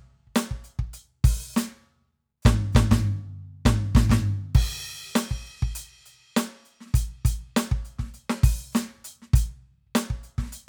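No faults to report in this music clip; nothing in it calls for a timestamp.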